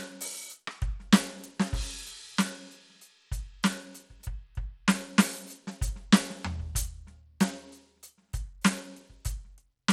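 From start to finish the music carries plainly audible codec damage, most likely Bluetooth SBC compression at a low setting that fits roughly 96 kbps. The upper bands are starved of bits, so the treble thins out and flickers, while a gritty, granular noise and aliased tones sit on top of the mix. On a spectrogram the high end shows blocky, intermittent patches and gaps rather than a smooth continuous fill.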